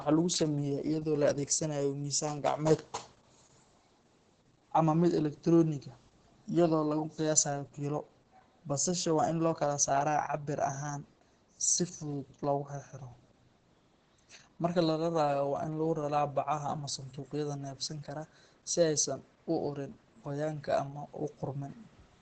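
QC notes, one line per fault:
Throughout, Opus voice compression: the speech sounds muffled and hoarse, with a slightly robotic, grainy edge, and there is nothing above about 9.3 kHz. This fits Opus in its SILK linear-prediction mode at a low bitrate, likely around 10 kbps. SILK models the vocal tract and codes the excitation coarsely, so breath and buzz turn rough. The band is cut to wideband, which removes the upper sibilance and air.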